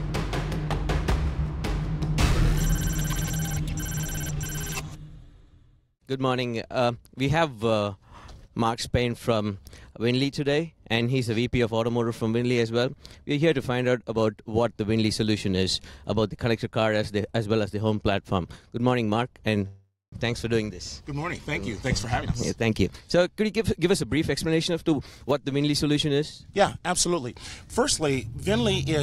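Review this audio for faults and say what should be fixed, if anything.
There's a call audio freeze from 19.67 to 20.14 s: the sound stretches into a fading buzz or hiss, then about 180 ms of silence, and resumes where it stopped without losing anything. That's likely packets stalling and draining the jitter buffer. A bit more jitter buffer headroom or better network prioritisation would help.

From 21.76 to 25.31 s there's a jitter buffer speed-up: playback runs at about 112% with the pitch unchanged, trimming roughly 0.4 s of backlog in small cuts. Letting the buffer shed delay more gradually would avoid that rushed feel.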